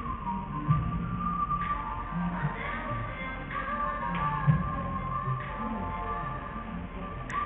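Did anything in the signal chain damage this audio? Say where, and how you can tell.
Yes, at the codec stage: the sound is likely Bluetooth SBC compression, heavily damaged throughout. Nothing survives above 8.7 kHz, and gritty, aliased noise rides on everything, which fits a starved bit pool near 48 kbps. A clean low-pass filter would cut the treble without adding that grit.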